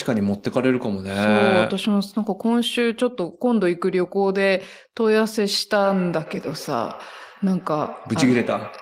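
Feedback echo between two devices from 5.72 s: another device's playback re-enters the microphone, so faint repeats follow the speech roughly every tenth of a second.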